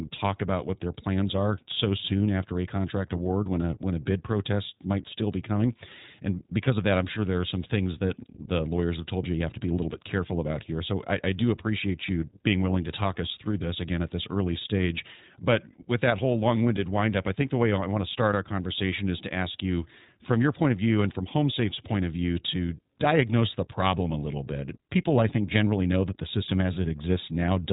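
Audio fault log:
throughout, iLBC codec: the speech passed through a narrowband VoIP codec that codes each 20 ms frame's excitation independently, which fits iLBC at about 15.2 kbps. Nothing above 3.8 kHz survives, so speech sounds muffled, plainly rough and slightly synthetic.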